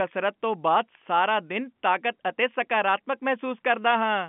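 Nothing stood out as a fault on listening to this speech, which carries the narrow band of an ordinary telephone line.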